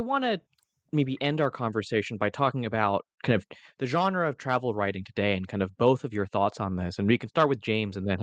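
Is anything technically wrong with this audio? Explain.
No, nothing is technically wrong with this audio.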